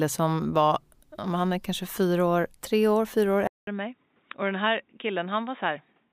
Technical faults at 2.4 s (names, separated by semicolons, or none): none